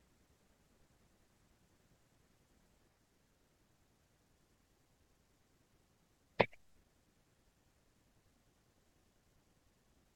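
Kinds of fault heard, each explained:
No audible faults detected.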